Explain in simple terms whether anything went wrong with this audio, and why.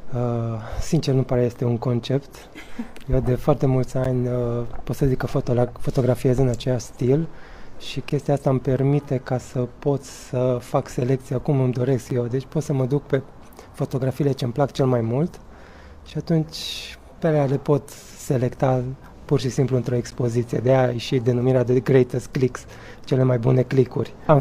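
A gap between stream segments: the 4-second pieces don't quite join, so brief silent holes of about 7 to 13 ms click in at 4.04, 8.10, 12.10, 16.10 and 20.11 s.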